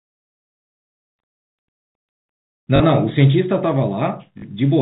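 At 2.76 to 2.80 s and again at 4.38 to 4.42 s, packet loss with the last packet repeated fills 40 ms gaps. Each gap fits two lost 20 ms packets. Each gives a brief robotic stutter.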